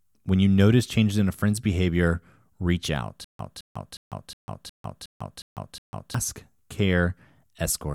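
Speech clip with a stutter with silent gaps from 3.24 to 6.14 s: a 214 ms fragment repeats eight times at a 363 ms period, with 148 ms of digital silence between repeats. This likely comes from a stalled stream replaying its last buffer, and the audio for that span is lost.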